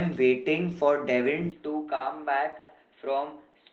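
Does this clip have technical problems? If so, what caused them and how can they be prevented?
Yes, there are three problems. From 1.5 s to the end, the speech turns duller and a bit quieter, about 5 dB down, with nothing above roughly 4.1 kHz and a faint new noise floor sitting well under it. There's also a 20 ms dropout right at the change. That's most likely the input switched to a poorer device, such as a headset dropping into its narrowband call profile or the system falling back to another mic. To prevent it, pin the input device in the app's settings and turn off automatic switching.

Between 1.95 and 2.02 s there's a short stall from a late packet. A packet missed its slot, the jitter buffer ran dry, and the receiver stretched the last bit of sound by about 50 ms until the packet turned up. Nothing is actually lost, but that moment drags, held slightly too long. To prevent it, give the call a steadier network path, or let the jitter buffer run a little deeper.

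From 2.59 to 2.71 s there's a call audio freeze. The sound hangs as a sustained, fading sound for about 100 ms without dropping to silence, and then the speech picks up exactly where it stopped, so nothing is missing and a gap has just been inserted. The likely cause is a longer run of delayed packets emptying the buffer. To prevent it, use a wired connection and avoid congested Wi-Fi, or reserve bandwidth for the call.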